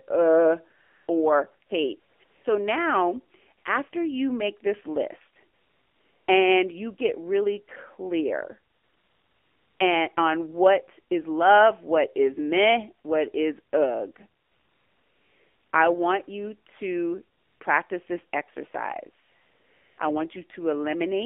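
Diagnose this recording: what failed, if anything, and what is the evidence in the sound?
The codec stage is the main failure. The whole recording carries AMR narrowband mobile codec damage at 7.4 kbps, and it is plainly audible: a buzzy, synthetic edge on the speech and a telephone-band tone confined to roughly 250 Hz to 3.4 kHz. On a spectrogram this shows as a hard ceiling near 3.4 kHz with nothing above it and a thinned region below 250 Hz. The low bit budget forces a crude excitation model, which produces the buzz.

The second failure is in call processing, where AMR comfort noise replaces pauses. Eleven gaps between 0.82 s and 19.98 s lasted from 20 ms to 1.3 s. Examples are 5.54 to 6.28 s, after "you make this list" and before "and you get really"; 8.74 to 9.80 s, after "you get really clear" and before "and on what is"; and the longest, 14.42 to 15.72 s. The transmitter judged these stretches silent and sent no speech frames. 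The receiver filled them with generated noise. On a spectrogram each gap is a smooth, uniform block of noise with abrupt vertical edges. On the waveform it is a flat, low-level band that switches on and off.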